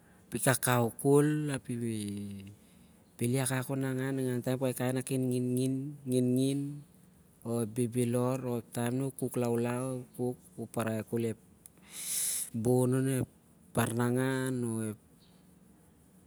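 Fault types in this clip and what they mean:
Nothing stands out here, with no faults to list anywhere in this bit of speech.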